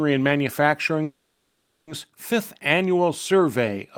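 At 1.03 s the speech stops moving forward. For the next 0.84 s, until 1.89 s, the last sound is stretched out as a fading buzzy hiss. There is no true silence in the gap. This is a call audio freeze. Packets were likely held up in transit, so the jitter buffer ran dry and the receiver filled the wait. When the speech resumes, it picks up where it left off. Nothing is lost. Everything after simply arrives about 840 ms late.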